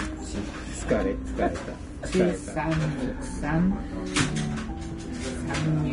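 From start to finish the whole clip carries what's most likely Vorbis compression, and pretty heavy compression at that. Nothing comes through above about 10.6 kHz, so the top end just stops. The treble that's left sounds hissy and grainy, because fine detail has been coarsely quantised into noise of roughly the same energy. Tones come out roughened and attacks smeared, which fits a low bitrate somewhere around 30 kbps.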